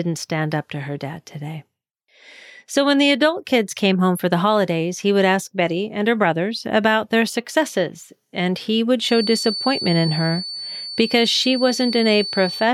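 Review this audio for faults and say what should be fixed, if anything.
A feedback whistle enters at 9.00 s, just after "successes and he would", and continues to the end of the clip at 12.73 s. It is a thin, steady tone at 4.5 kHz, sitting roughly 10 dB below the speech and slowly swelling and fading in level. On a spectrogram it appears as a narrow horizontal line at 4.5 kHz running unbroken beneath the speech energy. The likely cause is a loudspeaker-to-microphone loop sitting right at the edge of feedback, so that this single frequency keeps ringing without building up. To prevent it, reduce monitor gain or move the speaker away from the microphone's pickup, and notch out 4.5 kHz if the loop remains.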